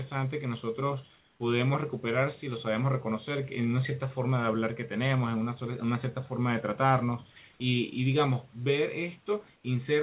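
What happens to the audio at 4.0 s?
Nothing goes wrong at 4.0 s; the speech there passes through intact.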